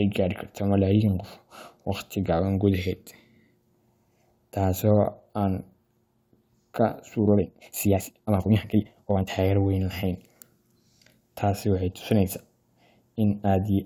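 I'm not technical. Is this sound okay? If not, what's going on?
No. A time-stretched section runs from 7.33 to 9.29 s. The speech abruptly speeds up 1.88 times and sounds rushed, though its pitch doesn't change. Software likely squeezed this part to fit a set length by cutting out tiny slices.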